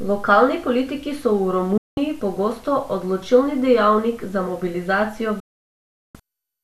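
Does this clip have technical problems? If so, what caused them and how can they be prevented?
Yes. Digital broadcast dropouts at 1.78 to 1.98 s, after "politiki so v", and at 5.40 to 6.15 s, after "odločilni dejavnik za mobilizacijo": the receiver lost valid frames and muted, with roughly 3 ms fades, discarding 0.19 s and 0.74 s of speech. Stronger reception, a better antenna or error-protected transmission would prevent it.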